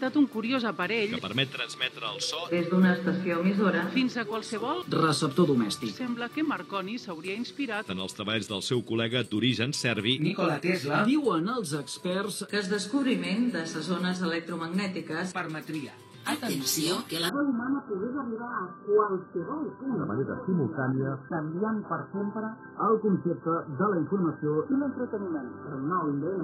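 The audio switches abruptly to an adaptive stream at a lower bitrate at 17.29 s and stays there to the end at 26.44 s. There is no gap at the switch. The quality simply drops. Nothing is left above 1.7 kHz, so the sound turns dull and muffled, with coarse codec artefacts. This fits a stream stepping down from around 96 kbit/s to around 8 kbit/s after the connection slowed.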